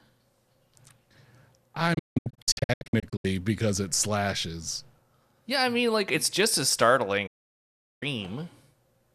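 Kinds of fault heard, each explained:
Digital broadcast dropout: at 1.94 to 3.25 s and again at 7.27 to 8.03 s the receiver stopped getting usable frames and muted, each cut fading out and back in over 8 ms. The first breaks into several short holes spread across 1.3 s, the longest 168 ms, before the speech returns on "because it slashes". The second comes right after "like it's just as". Each loses 744 ms of programme, which fits around thirty failed frames.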